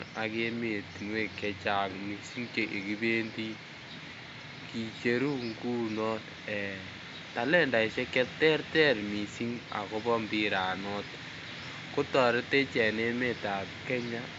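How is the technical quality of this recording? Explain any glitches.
The technical quality is good and there are no glitches to explain, just a faint room noise sitting about 32 dB below the speech.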